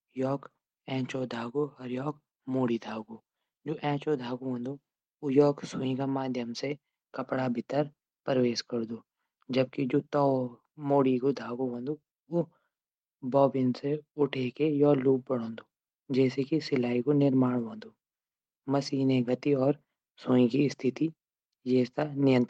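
Listening through the speech, nothing stood out as a technical problem at any point.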